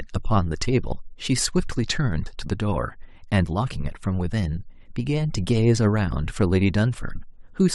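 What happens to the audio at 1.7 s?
At 1.7 s the speech runs on cleanly, with no dropout, click, distortion or other fault at that point.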